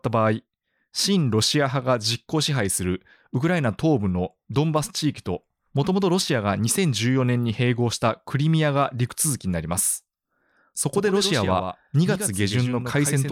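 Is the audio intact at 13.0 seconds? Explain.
No, it isn't. From 10.93 s to the end there's a doubled audio track: a second full-band copy of the speech, roughly 10 dB quieter, trails about a tenth of a second behind. It's likely from a slower capture path or an out-of-step edit, so it sounds like a dry, abrupt echo with no room tail.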